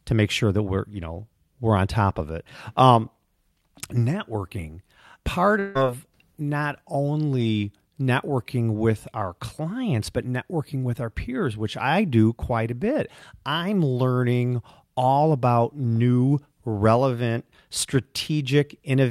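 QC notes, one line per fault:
5.59–5.77 s, long network dropout: about 0.16 s of speech is skipped, likely lost packets. A fading buzzy fill bridges the gap rather than a brief click.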